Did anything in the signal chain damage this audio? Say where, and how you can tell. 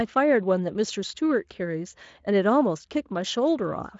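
No, nothing in the signal chain stood out on listening to this speech, which comes through a Speex path with its content ending around 7.7 kHz.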